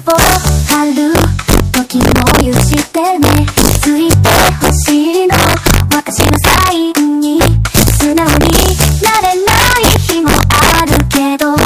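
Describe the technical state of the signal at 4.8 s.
At 4.8 s the signal carries integer overflow, as it does across the whole clip. The gain drives it about 5 dB past the integer limit. Nothing clamps the excess. Instead, each peak that crosses the top wraps around to the opposite extreme of the range. Only a small fraction of samples go over, roughly one in fifty. Each one still produces a full-scale jump. The result is harsh, violent cracks on the loudest moments, far sharper than ordinary clipping.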